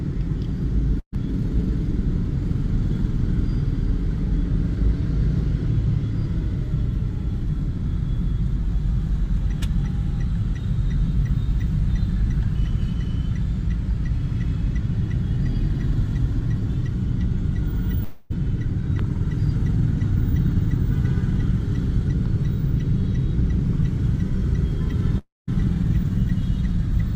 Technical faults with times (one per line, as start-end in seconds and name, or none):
0.99-1.14 burst of packet loss
18.03-18.32 long network dropout
25.18-25.49 long network dropout